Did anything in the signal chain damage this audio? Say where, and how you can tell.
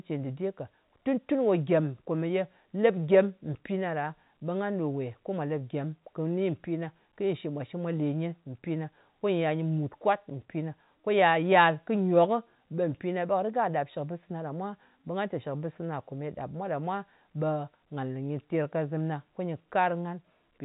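No, nothing stood out on listening as damage from any stage of the chain; the speech sounds like ordinary G.711 telephone audio, with nothing above about 3.8 kHz, as that format should sound.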